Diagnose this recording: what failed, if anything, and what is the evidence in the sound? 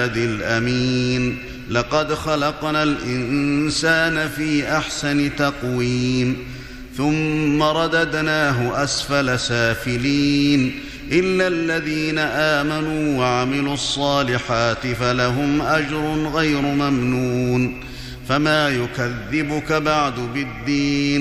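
Nothing failed here, as far as I can hear; the audio runs without any dropout, glitch or distortion that would point to a problem anywhere in the chain.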